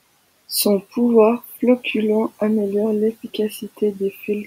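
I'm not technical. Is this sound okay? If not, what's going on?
No. The noise suppressor mistook some speech for background noise, so at 1.44 to 1.59 s and 4.13 to 4.28 s the speech was cut by the noise suppressor and sounds briefly swallowed or faint.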